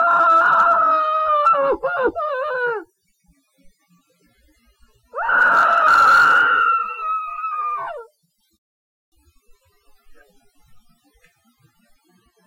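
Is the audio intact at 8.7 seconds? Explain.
No, a rebuffering stall is under way: the player ran out of downloaded audio from 8.57 to 9.12 s, so the sound drops to silence, then resumes exactly where it stopped, adding about 0.55 s.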